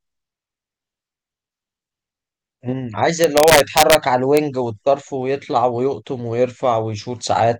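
A gain or summing stage in this speech recording overruns its integer range instead of limiting, causing integer overflow: from 3.24 to 3.95 s, driven about 2 dB past full scale, peaks wrap to the opposite sign, and again at 4.37 s, just at the limit, giving violent cracks far harsher than clipping.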